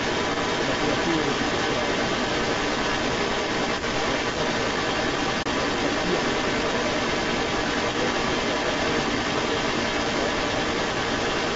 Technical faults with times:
0.00-11.56 echo leak
5.42-5.46 AAC frame loss with muting

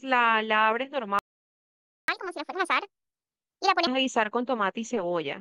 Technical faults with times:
1.19-2.08 playback stall
2.08-3.87 catch-up at higher speed

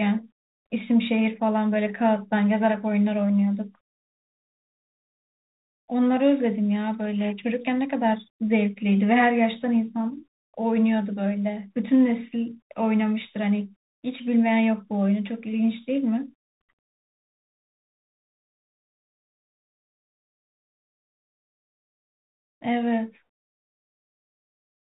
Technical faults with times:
0.00-24.90 Bluetooth CVSD headset codec

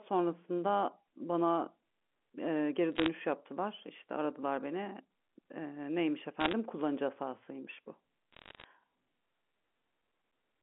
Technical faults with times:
2.95-3.08 bit errors on a digital phone line
6.40-6.53 bit errors on a digital phone line
8.32-8.64 bit errors on a digital phone line

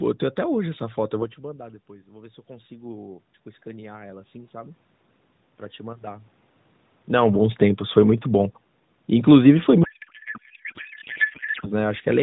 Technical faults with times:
9.84-11.69 codec payload misread

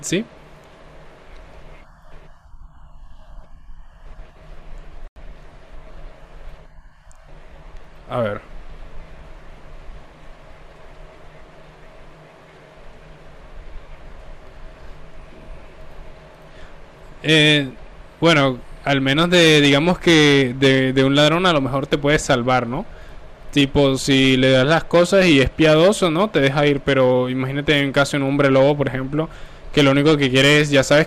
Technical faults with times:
5.08-5.16 corrupt frame muted
25.94 corrupt FLAC frame

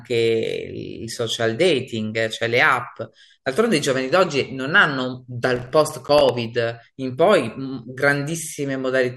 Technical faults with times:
5.56-6.29 processor overload crackle

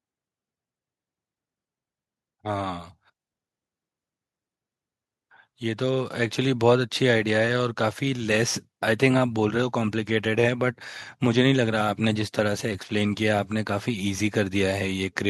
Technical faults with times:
5.60-6.42 automatic gain rising

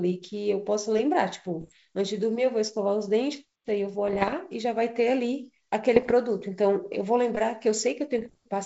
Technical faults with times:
1.60-1.76 bit errors on an ADPCM link
4.08-4.34 bit errors on an ADPCM link
5.95-6.12 bit errors on an ADPCM link
8.18-8.35 bit errors on an ADPCM link

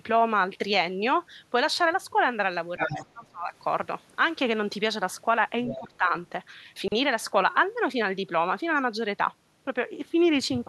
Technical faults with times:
2.76-3.53 speech suppressed in double talk
2.80-3.06 other side's voice leaking through
5.65-5.78 other side's voice leaking through
5.78-6.13 speech suppressed in double talk
6.76-6.92 chunks out of order

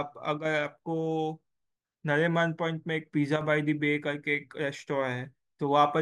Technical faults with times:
0.38-0.45 one channel drops out
3.36-3.41 one channel drops out

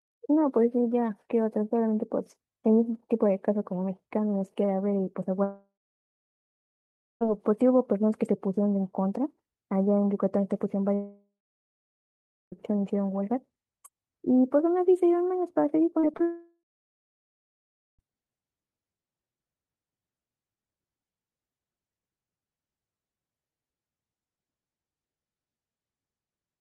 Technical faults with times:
5.43-7.23 long network dropout
10.95-12.54 long network dropout
16.00-16.21 short concealed packet loss
16.23-18.01 long network dropout

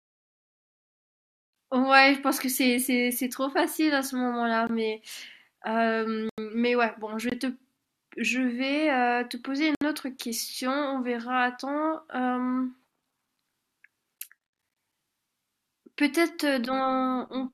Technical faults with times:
4.67-4.69 block of digital silence
6.29-6.38 block of digital silence
7.30-7.32 block of digital silence
9.75-9.81 block of digital silence
16.65 block of digital silence

